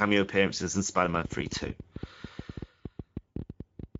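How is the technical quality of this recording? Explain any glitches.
The recording has clear technical problems: codec damage throughout, two short dropouts, and a run of clicks over most of the clip from about 1 s on.

Speex codec: The whole clip passes through a low-bitrate speech coder, which fits Speex at about 16.8 kbps. With few bits left for the excitation signal, the speech sounds hoarse and noisy. Any content above 8 kHz is only a shaped, hissy fill rather than real detail.

VoIP packet loss concealed by the speech codec: At 0.71 s a 20 ms gap, which fits one lost frame, was filled in by the decoder. It did this by extending the last pitch and filter at falling gain. A longer 40 ms gap from 3.32 to 3.38 s, consistent with two lost frames, was handled the same way. Both spots become a brief, fading smear, and the voice stays weakened for a moment afterwards.

Train of clicks: Right after "appearances in", from 1.05 to 3.96 s, roughly thirty similar pulses land at about ten per second with uneven spacing. 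They peak at around 10 dB above the speech and tick over pauses as well. The likely cause is interference or a faulty connection.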